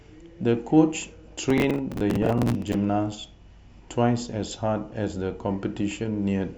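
From 1.50 to 2.74 s there's processor overload crackle: roughly forty missed buffers of around 10 ms each replay stale audio, giving a gritty, tearing crackle over the speech.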